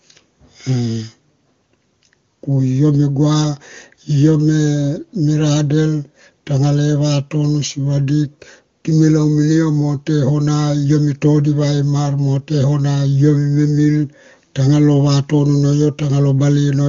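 No technical faults can be heard in this speech recording, which comes through the AMR wideband (HD Voice) codec at a high rate.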